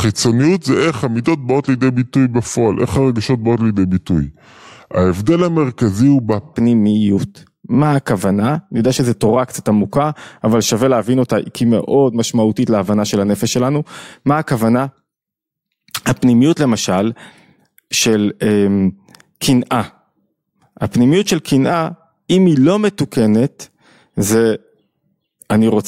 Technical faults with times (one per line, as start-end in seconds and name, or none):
0.00-6.54 section at the wrong speed